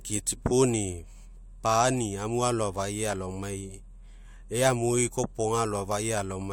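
No technical faults are audible anywhere in the recording.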